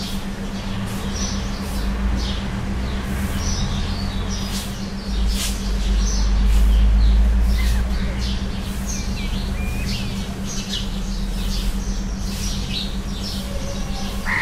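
No technical faults are audible.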